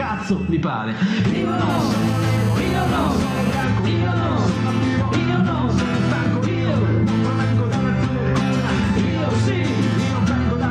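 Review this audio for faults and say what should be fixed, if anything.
GSM phone buzz, 1.70 to 3.64 s: a nearby phone's 217 Hz call bursts get rectified into a steady, raspy buzz about 15 dB down, harsher than smooth 50/60 Hz mains hum. Keep phones away from the recording chain, or set them to flight mode while recording.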